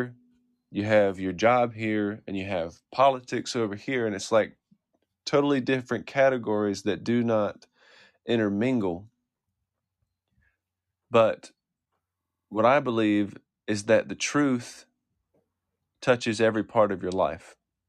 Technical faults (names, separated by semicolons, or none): system hang loop